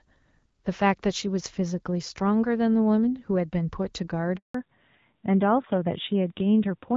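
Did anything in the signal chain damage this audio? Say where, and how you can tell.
Yes. At the network stage, a handover gap runs from 4.36 to 4.54 s. The speech cuts out into 180 ms of silence while the call switches links and no frames arrive.

At the codec stage, there is a fallback to narrowband from 4.54 s to the end. Nothing remains above 4 kHz and the speech turns duller, consistent with a low-rate narrowband codec replacing the wideband link.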